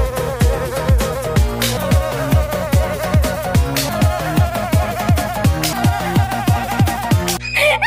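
From the first moment to the last, a mains hum sits under the sound: a steady low tone at 60 Hz, about 15 dB below the signal. Power-line current has leaked into the audio path, most plausibly through a ground loop or a transformer near the cabling. Unlike wind rumble or handling thumps, which swell, wander and stop, this tone holds one fixed pitch and an unchanging level regardless of what the audio above it does.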